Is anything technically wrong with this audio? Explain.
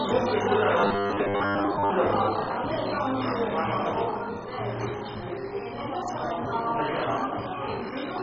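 Yes, two things stand out.

All the way through, the audio is dull and gritty, with nothing above 7.5 kHz and a gurgling, granular texture. That's the signature of MP2 compression, likely at a very starved bitrate (it sounds like something around 16 kbps). Layer II divides the spectrum into 32 sub-bands and hands out bits to each. With so few bits available, the upper bands get dropped completely, and what remains is coarsely quantised, so the damage here is heavy.

From 0.81 to 1.90 s, the sound turns into a rigid, metallic buzz at 100 Hz. That's robotic sound from repeated short buffers, likely caused by audio arriving too slowly. The playback fills each gap by looping the last chunk, which here fits a 10 ms buffer. Most of that stretch is repeats rather than real audio, and the looping imposes that fixed 100 Hz buzz until normal flow resumes.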